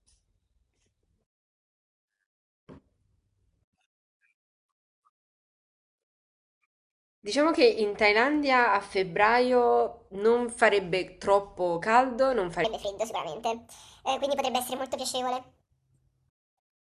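Wrong sample rate, from 12.64 s to the end of the clip at 16.82 s. The samples in this stretch run through the converter faster than they were captured, with no resampling. The speech jumps to 1.45 times its proper speed and rises about 6.5 semitones, so the voice turns thin, chipmunk-like and rushed. That ratio fits audio recorded near 22 kHz being played back at 32 kHz.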